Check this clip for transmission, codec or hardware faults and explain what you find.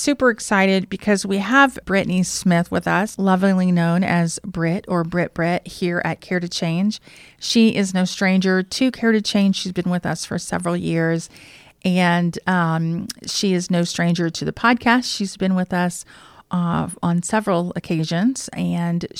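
No transmission, codec or hardware faults can be heard anywhere in the speech. Nothing in the recording calls for a fix.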